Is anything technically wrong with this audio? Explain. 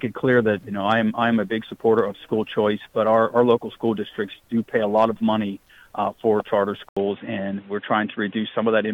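Yes. The input is likely switched to a poorer device at 6.89 s, running to the end. After an 80 ms gap, the band stops near 3.9 kHz, so the sound turns dull and boxy at about the same level, with new background noise roughly 35 dB down.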